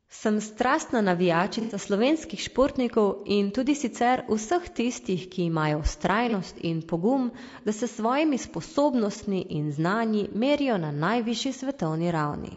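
Speech with a rough, grainy texture throughout: noise fills the gaps between voice harmonics and the top band sounds thin and synthetic, which is plainly audible. This is likely low-delay AAC compression of the AAC-ELD kind used for video calls, whose short frames resolve pitch harmonics poorly, and the degree of damage fits a bitrate around 32 kbps. AAC frame loss with concealment occurs three times, each heard as a brief smeared, noisy patch where the decoder reuses the last good spectrum. The first runs from 1.61 to 1.75 s, just before "slovenskih športnikov in tudi," and its roughly 90 ms of filled-in audio fits three lost frames. The second, from 6.29 to 6.34 s between "vseh tistih ki imajo" and "in pogum da se," and the third, from 9.17 to 9.22 s, are each about 30 ms, consistent with a single lost frame.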